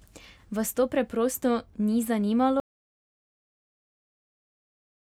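Speech running along normally until 2.6 s, when there's an audio dropout to silence. The signal cuts out mid-flow and stays silent right to the end, with no room tone at all. Likely the input dropped, a device disconnecting or a stray mute, while recording carried on.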